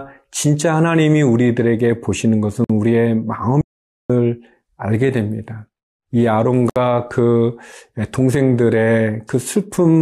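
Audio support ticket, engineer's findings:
Gap at a join of encoded pieces: brief silences at 2.64–2.70 s (52 ms) and 6.70–6.76 s (64 ms), 4.0 s apart. Encoder delay and padding were left untrimmed. Thin vertical blank stripes on the spectrogram.

Audio dropout to silence: 3.61–4.10 s, 484 ms of silence with no room tone. Likely a lost input feed written as silence. Flat line on the waveform, empty spectrogram column.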